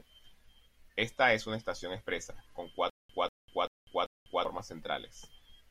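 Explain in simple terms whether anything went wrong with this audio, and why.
Something went wrong in the playback: the stream likely stalled, and each time it tried to recover it replayed the last scrap of audio and then ran dry. That causes a stutter with silent gaps from 2.90 to 4.45 s, just after "una estación expresa con". A short burst of about 191 ms repeats four times, each followed by roughly 197 ms of dead silence, so it pulses evenly every 389 ms, and the speech meant for that stretch is lost.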